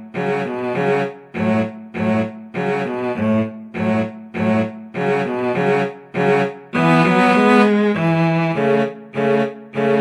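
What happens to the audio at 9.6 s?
Nothing goes wrong at 9.6 s; the audio plays through that moment intact, with no dropout, click or distortion.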